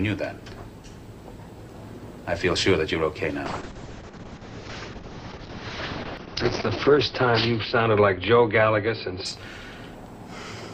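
At 3.46 s there's a call bitrate drop, which sounds like roughly 64 down to 6 kbps. Highs get cut at 6 kHz, so it's muffled and watery, clearing by 9.57 s.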